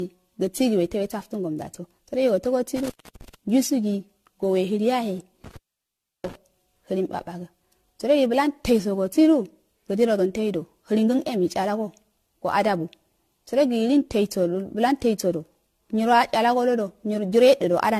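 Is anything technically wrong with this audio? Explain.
Yes, there are two problems. Generation loss runs through the whole speech clip: the sound is swirly, smeared and hollow, with blurred attacks and nothing above 14.1 kHz. The likely cause is repeated lossy re-encoding, around seven passes at a rate that points to 64 kbit/s AAC-LC, with each pass stacking new quantisation noise. A single encode at that rate would not sound this degraded.

Intermittent contact occurs from 2.76 to 3.35 s and from 5.44 to 6.35 s. A loose connection breaks the signal, which cuts out for about 0.31 s and then about 0.68 s. Crackle marks the edges and faint hiss fills each gap, unlike the clean silence of a digital dropout.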